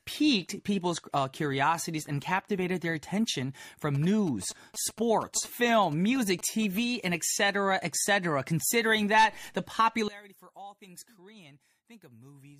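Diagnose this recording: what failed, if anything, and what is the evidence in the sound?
GSM signalling bursts hit the analogue wiring from 3.95 to 6.79 s, between "and captivated their attention" and "and etc etc": galloping ticks and 217 Hz buzz, well below the speech. A spectrogram shows comb-like vertical striping.

From 10.08 s to the end, just after "that the", the speech drops about 22 dB, likely from one channel inverted, so centred sound cancels in the mono sum. The waveform visibly collapses.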